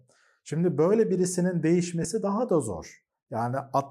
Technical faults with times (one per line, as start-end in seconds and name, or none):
2.03 lost LE Audio frames